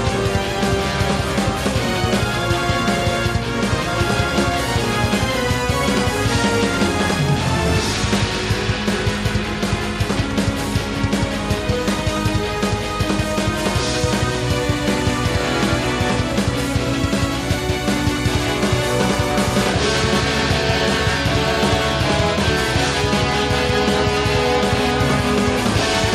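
Nothing stood out as a technical problem on listening.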